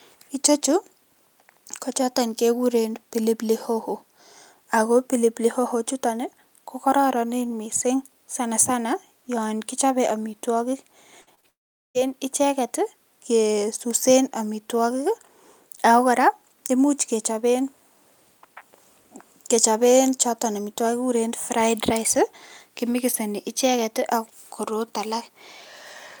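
A speech recording with a cluster of network faults in under a second. Right after "sanasana yon kichope amitwokik", a burst of packet loss at 11.21–11.29 s removes about 60 ms of audio. The receiver extends the last sound for roughly 50 ms and fades it into a short held buzz or hiss, then resumes slightly further on. Two short concealed packet losses follow at 11.35–11.39 s and 11.41–11.45 s. Each drops 20 ms, which the decoder patches by continuing the preceding sound before blending back in, leaving a brief smear or wobble. From 11.49 to 11.97 s the sound trails off and then goes silent for about 0.42 s, with roughly 0.46 s of audio lost. Speech returns at "icheket kesusen". This is likely a long network dropout, where nothing arrived for nearly half a second and the concealment faded out to silence.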